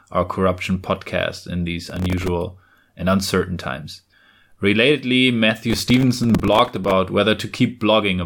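Speech with two bursts of gritty, tearing crackle, at 1.90–2.28 s right after "corruption podcast in these" and longer at 5.70–6.92 s. This is processor overload crackle: buffers of a few milliseconds repeatedly missed their deadlines, each replaying stale audio with hard edges.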